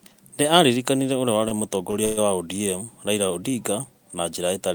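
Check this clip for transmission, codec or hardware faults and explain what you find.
Three transmission faults are audible, all of them gaps inserted into the speech rather than lost audio.

Two short stalls from a late packet occur at 1.48–1.53 s and 1.91–1.95 s. Each time the jitter buffer ran dry, and the receiver held the last sound for about 27 ms and then 19 ms. Nothing is lost, but the speech briefly lingers with a faint buzz.

A call audio freeze runs from 2.05 to 2.19 s. The speech stops and the last sound is drawn out for about 120 ms as a fading buzz that never drops to silence, then resumes where it left off, leaving the rest of the clip about 0.12 s later. The likely cause is packets held up in transit, which emptied the jitter buffer.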